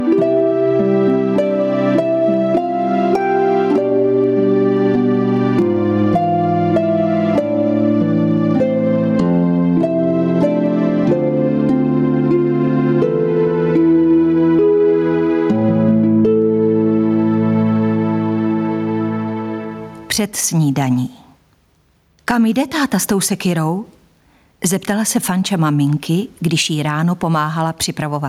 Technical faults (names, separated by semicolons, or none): gain pumping